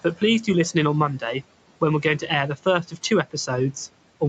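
Speech cut by the noise suppressor at 2.02–2.29 s and 2.83–3.11 s in this speech recording: the suppressor mistook quiet parts of the speech for background noise and pulled them down by about 10 and 12 dB, leaving brief stretches of speech sounding swallowed and faint.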